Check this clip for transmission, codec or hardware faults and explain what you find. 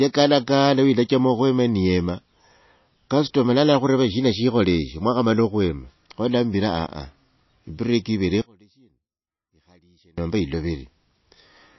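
Two faults are audible in this speech clip.

Throughout, the sound is plainly watery and swirly, with nothing above 5.8 kHz. This is likely MP3 compression at a low bitrate, around 26 kbps, dropping weak frequency lines and cutting the treble.

From 8.42 to 10.18 s, just after "break ivere", the audio drops by about 31 dB, leaving only a residue. This likely points to one channel inverted, which cancels the shared content when the channels are summed to mono.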